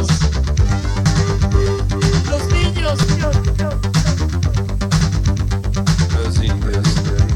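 Short skips occur at 1.06, 3.03, 5.01 and 6.98 s, evenly spaced about two seconds apart, each removing a few tens of milliseconds of audio with no gap of silence. This is audio missing between chunks, likely from the recorder handling the sound in 2.0 s blocks and dropping a sliver at each handover. On a waveform the joins appear as abrupt seams where the shape jumps discontinuously; a spectrogram shows thin vertical breaks where patterns shift suddenly.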